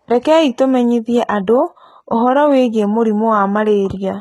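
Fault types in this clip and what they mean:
HE-AAC compression: The speech cuts off at about 11.8 kHz yet stays bright, while s sounds turn gritty and lispy, fitting a heavy, likely HE-AAC encode near 16 kbps. Unlike a low-pass, the treble isn't missing but rebuilt from copied lower bands, sounding metallic.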